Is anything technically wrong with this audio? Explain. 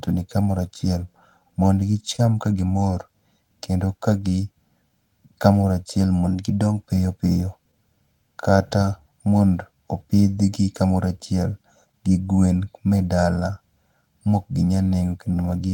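Yes, there are several timing and phase problems layered on this speech clip.

Channel delay (comb filtering) runs through the whole clip. One channel sits about a millisecond and a half behind the other, and when they're summed to mono the shared content cancels at evenly spaced frequencies starting somewhere around 400 Hz. The result is that hollow, phasey colouring.

There's also clock drift between sender and receiver throughout. The sender's clock seems to run slow, somewhere around one and a half percent, so the receiver's buffer keeps draining and it has to pad the stream to keep going. That produces small, unevenly spaced hiccups.

Those show up as repeated timing corrections from 1.39 s to 15.36 s. The receiver keeps repeating short slivers to stretch things out, which brings the effective speed to about 99% and adds roughly 150 ms overall. You hear a slightly unsteady, dragging tempo.

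At 2.16 to 2.20 s there's a short stall from a late packet. The buffer ran dry, and the receiver held the last sound for 25 ms until the packet turned up, then carried on from the same spot. Nothing is lost, but the sound gets a brief held, buzzy smear.

From 6.27 s to 6.86 s the audio speeds up by 5.41% and rises about 91 cents, nearly a semitone. That's likely a drift correction step, where the clock-matching software jumped the playback rate to rebalance its buffer.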